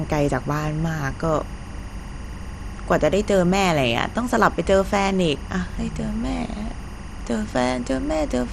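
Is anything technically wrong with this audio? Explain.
Yes, two faults run through the whole speech clip.

Timecode bleed is present from start to finish. Linear timecode from a nearby track or cable has leaked in, and its square wave flips between tones near 1 kHz and 2 kHz at a rate that fits 24 frames per second. It sits roughly 25 dB below the speech as a constant chirping warble. A spectrogram shows two unbroken horizontal lines at those frequencies, with the gaps between phrases still filled.

The speech also sounds dull, with a gurgling, granular grain and plainly audible damage. The likely cause is MP2 compression at a low bitrate, around 64 kbps. Layer II divides the signal into 32 sub-bands and, short of bits, shuts off the highest ones and quantises the remainder coarsely. A spectrogram shows nothing above about 14.3 kHz, with blocky patches that flicker on and off below that ceiling.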